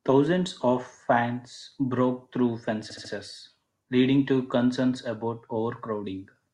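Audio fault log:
2.89–3.11 s, repeated frames: Just after "of fans broke through", a 72 ms slice of the speech plays three extra times in a row. The result is a short mechanical stutter. The pattern fits a block of compressed frames that was written or sent more than once. The decoder simply played it again. This stretches the clip by 216 ms.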